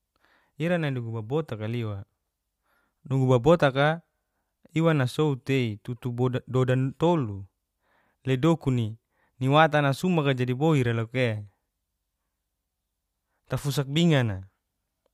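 Nothing is technically wrong with this speech recording, as no faults can be heard anywhere in it.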